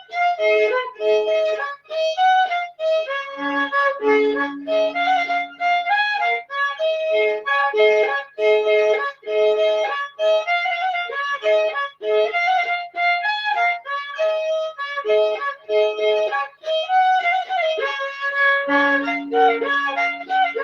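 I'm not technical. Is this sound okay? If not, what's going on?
No. From 16.48 to 16.66 s, the noise suppressor cut this sound, mistaking it for noise. Unlike a dropout, it sinks in level briefly rather than vanishing completely.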